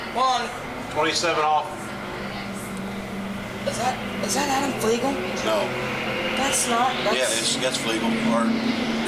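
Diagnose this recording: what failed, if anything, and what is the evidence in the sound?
Nothing failed here as far as I can hear; there's no stage of the chain that gives itself away, so there's no evidence of a fault to point to.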